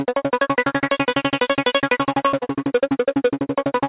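At 2.28–2.34 s and again at 2.40–2.44 s, short concealed packet loss: missing audio was patched by extending the preceding sound, showing as a smeared, flattened band in the spectrogram.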